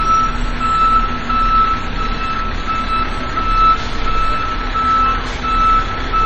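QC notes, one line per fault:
Throughout, MP3 compression: nothing is heard above 8.3 kHz, and the sound is plainly watery and swirling as faint detail flickers in and out and attacks smear, likely from an encoder starved of bits, which fits a low rate around 32 kbps.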